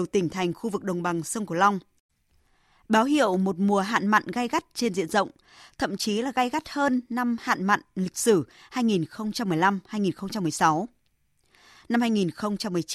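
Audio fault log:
No audible faults were found in this speech recording.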